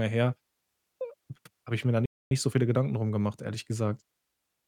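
At 2.06 s, just after "habe ich mir da", the speech cuts out mid-flow and the output falls silent for about 250 ms, until 2.31 s, when it picks up again with "so viele". This gap is a playback stall, likely caused by the player running out of buffered data or by its playback thread being blocked, so nothing reached the output until it recovered.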